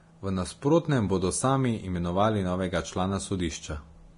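Right from the start and all the way through, the speech has that hissy, grainy texture you get from heavy Vorbis compression, likely the cause here. Nothing comes through above about 10.5 kHz. The treble that remains has been quantised so coarsely that fine detail turns into noise-like fizz of roughly the same energy. Consonant onsets sound smeared and tonal parts come out rough, which points to a low bitrate, somewhere around 30 kbps.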